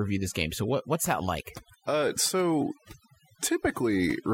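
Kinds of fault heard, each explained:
Overdone noise removal: aggressive suppression gates bands near the noise estimate throughout the speech, leaving twinkling background specks, seen as scattered isolated bins and holes on a spectrogram.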